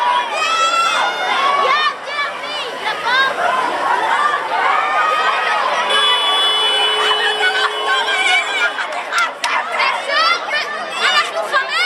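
No technical faults can be heard anywhere in this audio. Nothing in the sound calls for a timestamp or a correction.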